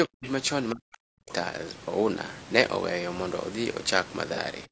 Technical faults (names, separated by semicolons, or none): low-delay AAC compression; speech suppressed in double talk; AAC frame loss with concealment